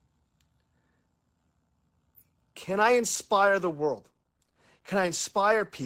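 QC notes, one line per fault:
2.71–5.85 s, adaptive stream at a lower bitrate: abrupt rise in codec artefacts with no gap, fitting an Opus switch from 64 to 16 kbit/s, unlike a dropout.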